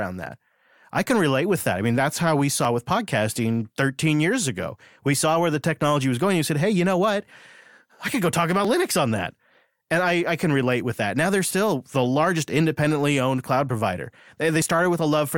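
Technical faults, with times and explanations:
2.65 s, 8.65 s and 14.62 s, overlap between stream segments: at each of these points the speech gives a small click or tiny skip, spaced evenly 6 s apart. The timestamps of neighbouring stream segments overlap slightly, and the player trims the supposedly repeated stretch even though that sound was never actually doubled. A few milliseconds of real audio disappear, so the waveform jumps abruptly from one value to another, producing the brief discontinuity heard at each segment boundary.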